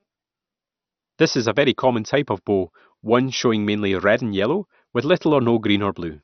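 Throughout, the speech sounds dull and gurglingly granular, with nothing above 6.2 kHz. The likely cause is heavy MP2 compression, consistent with a starved rate near 48 kbps.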